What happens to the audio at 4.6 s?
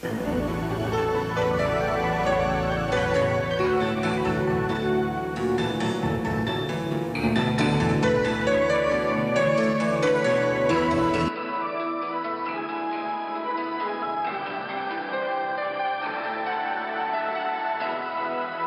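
Nothing goes wrong at 4.6 s; the audio plays through that moment intact.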